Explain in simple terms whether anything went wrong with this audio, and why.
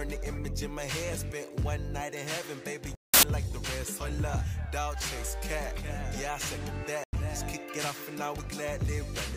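The sound drops to sudden silence from 2.95 to 3.23 s and again from 7.04 to 7.13 s. This is a corrupt frame muted: damaged chunks were rejected, and the player filled them with silence.

At 5.28 s there's a brief glitch. That's a corrupt FLAC frame: flipped bits made the decoder rebuild a moment of the waveform from wrong numbers.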